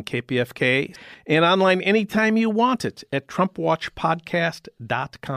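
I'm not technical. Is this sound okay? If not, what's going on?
Yes, this sound is okay, and there's nothing going on that needs fixing.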